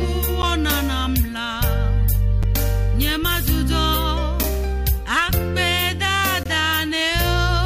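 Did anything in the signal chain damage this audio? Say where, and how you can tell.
Yes. Gaps between stream segments appear at the playback stage, at 0.42 s, 2.43 s and 6.43–6.46 s. Each is a hard-edged silent hole of 8 to 20 ms, falling on a 2-second segment grid. Segment timestamps leave small gaps, and the player fills them with silence. No audio is lost.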